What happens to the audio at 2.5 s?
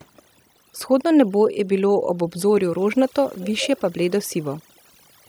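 At 2.5 s the speech is still under overdone noise removal, which spans the whole clip. Frequency bands near the estimated noise floor are pulled far down, leaving near-silent background with twinkling specks; a spectrogram shows scattered isolated bins against black gaps.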